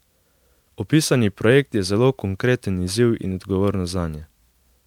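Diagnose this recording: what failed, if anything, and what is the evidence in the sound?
Codec stage: generation loss across the whole speech clip, swirly, hollow and smeared with blurred attacks, likely from about five MP3 passes, each sounding consistent with 128 kbit/s.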